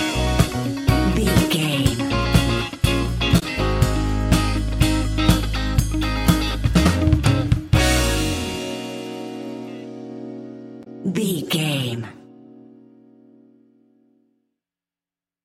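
Damaged data in the compressed stream causes two brief glitches, at 3.38–3.43 s and 10.83–10.87 s, each about 44 ms, where the decoder loses frame sync. At each one the decoder has to search for the next frame header before playback carries on.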